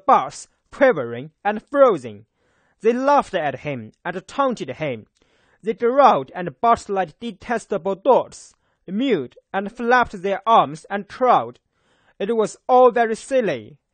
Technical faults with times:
0.00-13.93 AAC compression

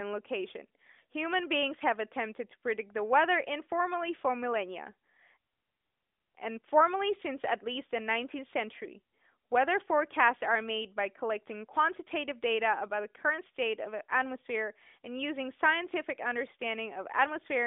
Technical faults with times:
none

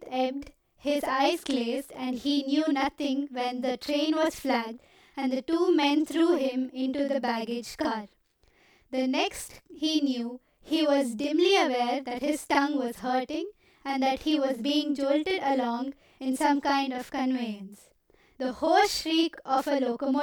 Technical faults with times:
0.00-20.23 channel delay (doubling)

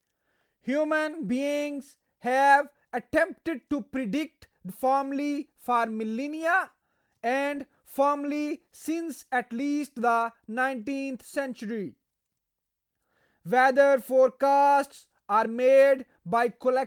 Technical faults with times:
4.68 skip ahead
6.75-7.56 jitter buffer speed-up

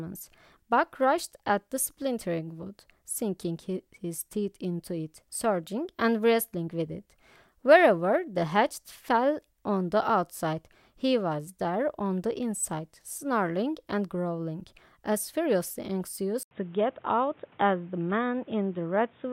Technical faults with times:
16.43-19.32 input switched to a poorer device

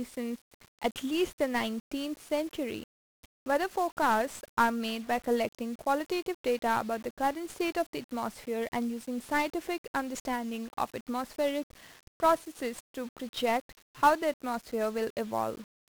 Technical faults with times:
0.00-15.90 1-bit DFPWM compression

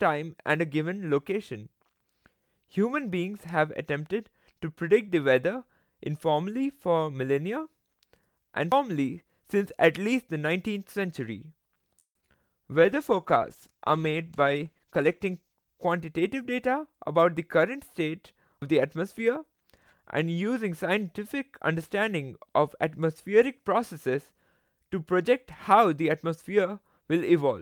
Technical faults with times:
8.72 audio missing between chunks
11.99-12.36 repeated packet loss (robotic sound)
12.66-13.78 jitter buffer slow-down
12.74-16.68 call bitrate drop
14.75-16.75 jitter buffer speed-up
18.62 audio missing between chunks

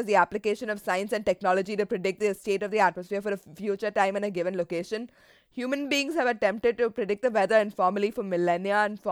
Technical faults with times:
none

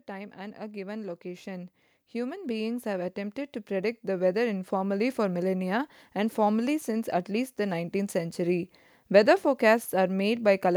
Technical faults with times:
0.06-5.21 automatic gain rising

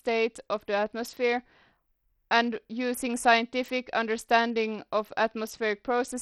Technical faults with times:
0.00-6.22 Bluetooth SBC compression

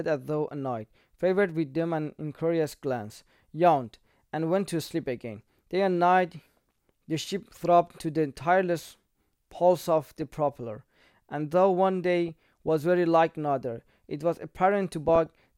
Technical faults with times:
1.39-1.50 DAB burbling
10.03-10.35 DAB burbling
12.28-12.69 DAB burbling
14.93-15.30 DAB burbling

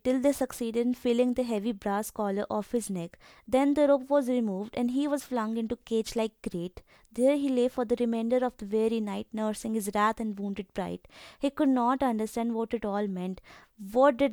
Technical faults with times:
none

